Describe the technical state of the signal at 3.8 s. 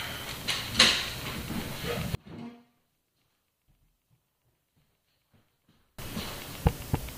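At 3.8 s the signal sits inside a span from 2.15 to 5.99 s where one channel inverted is the likely cause: one side of the stereo pair appears to have flipped polarity, so when the two are summed to mono the shared content cancels. The level drops by about 37 dB, leaving only the faint difference between the channels, with the centre of the sound almost gone until it returns at 5.99 s.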